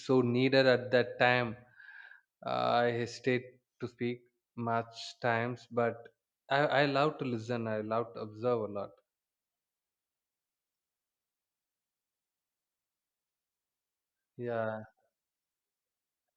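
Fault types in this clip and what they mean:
No technical faults can be heard in this speech clip. Nothing in the recording calls for a fault entry.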